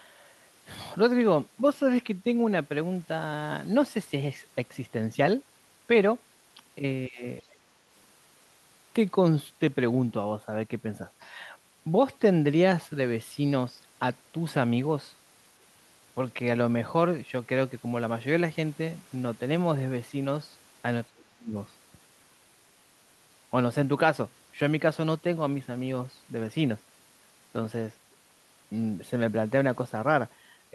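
It's a speech recording, and twice the talker gets pushed down: from 7.08 to 7.23 s the level dips by roughly 15 dB, and from 21.11 to 21.54 s it drops hard, around 30 dB, almost to nothing. That's speech suppressed in double talk, most likely an echo canceller that couldn't tell the talker from the far end and ducked everything. Right after the first dip, from 7.4 to 7.55 s, there's a very faint scrap of the other side's voice leaking through, sitting around 30 dB under the speech, likely far-end audio from the loudspeaker that the canceller didn't fully remove.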